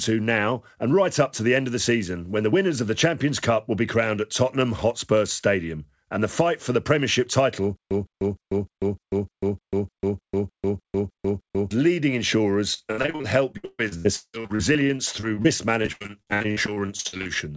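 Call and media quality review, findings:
Stutter with silent gaps, 7.77–11.71 s: a 160 ms speech fragment repeats 13 times, each followed by 143 ms of digital silence, every 303 ms. Likely cause: a stalled player or stream replaying its last buffer on each retry. The intended audio is lost.

Repeated packet loss (robotic sound), 12.74–15.46 s: choppy speech with holes. There are 23 gaps, the longest 169 ms, and about a third of the span is patched. The jitter buffer is stretching the last sound across lost or late packets.

Repeated packet loss (robotic sound), 15.82–17.31 s: the same choppy sound, with 21 gaps of up to 84 ms and roughly two-fifths of the span concealed. The loss is sustained, and the G.722 path's concealment is repeatedly extending prior audio.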